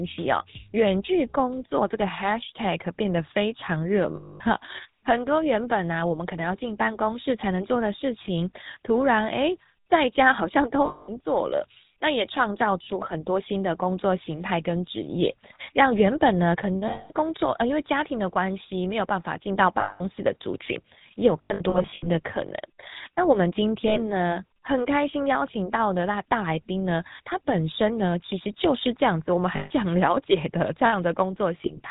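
Throughout, the speech has a buzzy, gravelly roughness and nothing above 4 kHz, the sound of the GSM full-rate codec at 13 kbps. It models the vocal tract and drives it with sparse, regularly spaced pulses, which produces the coarse texture.

Lost GSM frames break in at 4.16–4.41, 10.86–11.20, 16.88–17.12, 19.80–20.03, 21.42–22.08 (scattered brief gaps), 23.88–23.99, 29.56–29.71 and 31.58–31.80 (scattered). Each sounds like a rough, metallic ring. During each loss, the last good frame's settings were repeated.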